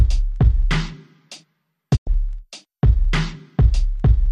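A digital broadcast dropout mutes the audio from 1.95 to 2.09 s after a 20 ms fade; roughly 96 ms is lost, which fits about four failed frames.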